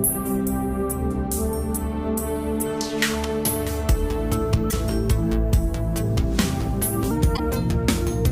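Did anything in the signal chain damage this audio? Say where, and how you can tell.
Yes. There are two instances of damaged data in a compressed stream, from about 4.67 to 4.73 s and from 7.33 to 7.40 s. This is a codec-stage fault. Each event is a short disruption of roughly 60 ms. Corrupted bytes in the compressed frames made the decoder misread or drop them, lose frame sync, and skip forward to the next valid header before resuming normal output.

A section at the wrong speed starts at 7.11 s and runs to the end of the clip. This is a playback or editing-stage fault. Speed and pitch shift together and abruptly: the audio runs at 1.17 times its original rate, raising the pitch by about three semitones and making everything sound brighter and hurried. The likely cause is that this segment was resampled or clocked against the wrong rate, so its timing no longer matches the preceding material.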